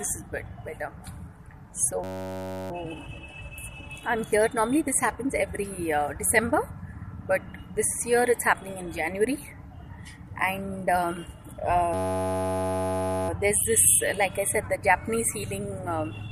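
From 2.04 to 2.71 s and again from 11.94 to 13.29 s, a system hang loop occurs. The system stalled while the hardware kept replaying one 10.67 ms slice, which fits a 512-sample buffer. It sounds like a steady 93.8 Hz buzz. The waveform shows identical repeating cycles, and the spectrogram shows evenly spaced horizontal harmonic lines.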